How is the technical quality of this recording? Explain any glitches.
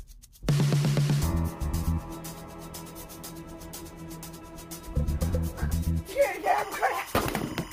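The recording carries one clear fault near the end. From 6.44 s until the clip finishes at 7.73 s, a steady chirping warble sits behind the sound, roughly 15 dB below it, flickering between two pitches near 1 kHz and 2 kHz. This is timecode bleed: linear timecode running at 25 frames per second on a neighbouring track or cable has leaked into the audio path, and its square-wave bit pattern alternates between those two frequencies as it encodes each frame.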